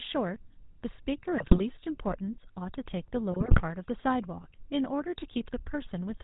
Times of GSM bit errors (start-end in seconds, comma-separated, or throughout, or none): 1.38-1.61, 3.32-3.61